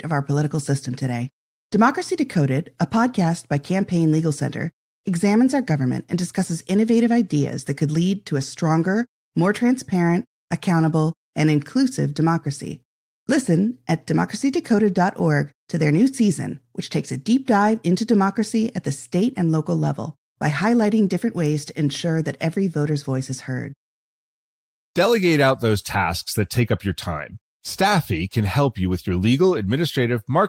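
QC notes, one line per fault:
Nothing stood out on listening to the speech in this recording.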